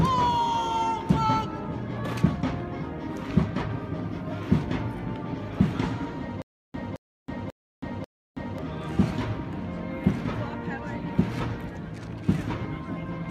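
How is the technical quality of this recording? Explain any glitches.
There's one real glitch, a stutter with silent gaps running from about 6.42 s to 8.58 s. A short burst of about 218 ms plays, then drops to dead digital silence for about 323 ms, and the same fragment comes back four times at a steady 541 ms cycle. The likely cause is a stalled player or stream re-serving its last buffered chunk on each retry before running dry, so whatever audio belonged in that stretch is simply gone.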